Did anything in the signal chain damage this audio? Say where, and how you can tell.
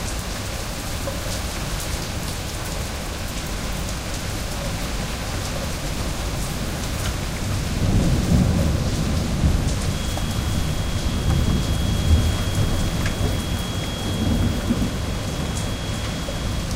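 Yes. A feedback whistle starts at 9.83 s and runs to the end at 16.75 s: a thin, steady 3.3 kHz tone about 20 dB beneath the sound, swelling and fading slowly in level. This is likely acoustic feedback, with a loudspeaker-to-microphone loop held just short of runaway.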